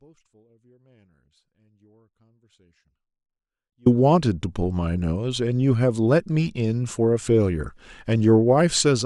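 From the very start until 3.86 s the speech is caught in an audio dropout to a faint residue. The wanted signal is missing, and only a faint trace of sound sits roughly 35 dB below normal level. The likely cause is a signal path broken upstream while the chain after it stayed live. At 3.86 s the full-level speech snaps back abruptly. On a waveform this appears as a near-flat trace that jumps to full amplitude, and on a spectrogram as a dim band before the harmonics return at once.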